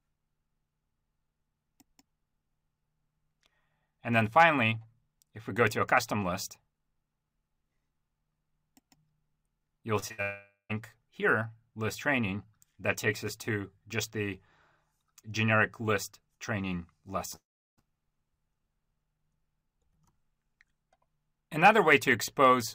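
Just before 10 s the connection starts failing in a cluster. At 9.99 s and again at 10.08 s there is short concealed packet loss: about 20 ms of audio each time failed to reach the decoder in time, and the receiver bridged the hole by extending the preceding sound for roughly 25 ms and 17 ms before blending back. Each is heard as a quick smear or wobble in the sound, with a sliver of material missing.

Immediately after, from 10.12 s to 10.20 s, comes a burst of packet loss. Around 60 ms of consecutive audio was lost, so the receiver kept extending the last sound for about 64 ms while turning it down. The result is a short held buzz or fading hiss, after which the audio resumes slightly further along than where it left off.

A long network dropout follows at 10.22 s to 10.71 s, likely caused by the stream stalling for nearly half a second. Roughly 480 ms never played. The concealment stretches the last sound into a decaying tone or hiss, ending in about 140 ms of silence, and the sound picks up again past the gap.

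A second long network dropout, at 17.35 s to 17.79 s, likely has the same cause: an interruption of about 420 ms. Here the filled tail dies away quickly and most of the gap, about 360 ms, is plain silence before the audio returns further on.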